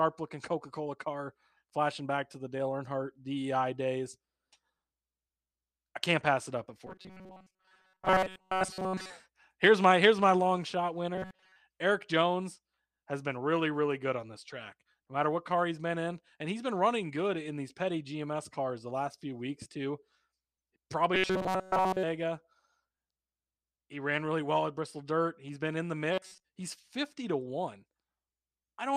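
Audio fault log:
6.87–9.10 s, 11.15–11.56 s, 21.15–22.03 s, 26.13–26.44 s: robotic sound from repeated short buffers. The speech becomes a rigid 188 Hz metallic buzz. A roughly 5.3 ms chunk is likely being looped, replacing most of the audio and all of it at 21.15 s.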